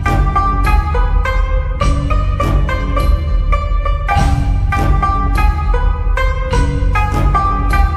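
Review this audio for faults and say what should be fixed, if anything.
No faults; nothing needs fixing.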